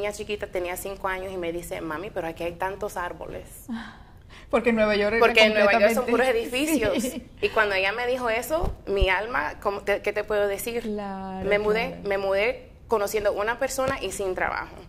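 A loud pop at 9.02 to 9.05 s, and another at 13.88 to 13.91 s, each a single sharp burst lasting about 30 ms and peaking roughly 15 dB above the surrounding audio, which carries on underneath. The likely cause is a sudden voltage step or pulse, from a plug, switch, static discharge or driver glitch, entering the signal path, with the downstream circuitry shaping it into a brief pop.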